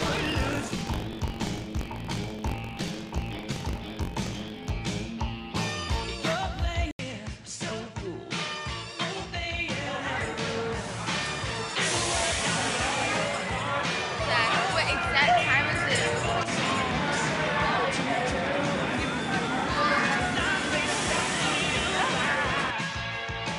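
From 0.0 to 4.70 s there is buffer tearing: a steady robotic rattle at 46.9 Hz, which fits a 1024-sample buffer. Roughly a tenth of each buffer replays audio about 40 ms old. Unlike random clicks, it is locked to that rate and sounds only with signal.

At 6.91 s the sound drops out for 80 ms, then continues to the end with a narrower, duller band and a fresh noise floor about 30 dB down, at roughly unchanged level. This is likely an input switched to a poorer device. The gap and changed noise set it apart from simple filtering.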